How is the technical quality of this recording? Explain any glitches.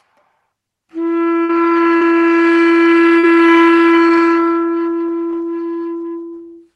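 The recording has three dropout glitches where the call's packet stream broke up, heard over the coding texture and the top end rolled off near 12 kHz that fit a low-bitrate Opus call path.

At 1.43 to 1.51 s there is a burst of packet loss. About 60 ms of audio never arrived, so the receiver stretched the last sound for roughly 54 ms while fading it. This gives a brief held, dimming smear before the sound jumps ahead.

At 1.97 to 2.03 s and 3.19 to 3.25 s there is short concealed packet loss. About 40 ms went missing each time, and the receiver extrapolated the preceding sound before blending back. Each gap is audible as a quick smear or wobble.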